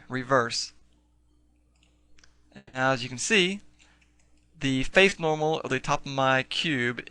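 At 0.79 to 0.83 s, a short concealed packet loss: about 20 ms of audio failed to reach the decoder in time, and the receiver bridged the gap by extending the preceding sound before blending back into the real signal. The patch is heard as a brief smear or wobble. The same happens at 5.09 to 5.13 s, again a 20 ms hole papered over with continued sound.

From 2.57 to 2.75 s the audio stops being genuine. For about 160 ms the preceding sound carries on as a fading buzz or hiss, then roughly 20 ms of silence follows before the audio resumes further along, with the intervening part gone. This is likely a long network dropout, during which nothing arrived and the receiver could only extend and fade what it last had.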